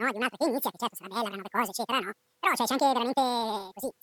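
Throughout, audio read two samples at a time (double speed) plays the speech twice as fast and 12 semitones higher. The spectrogram shows harmonics spaced twice as widely.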